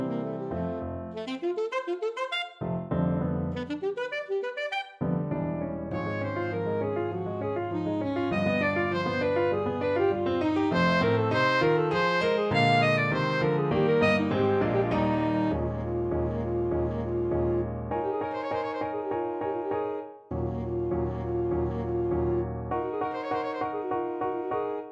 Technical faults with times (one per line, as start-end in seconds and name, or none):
none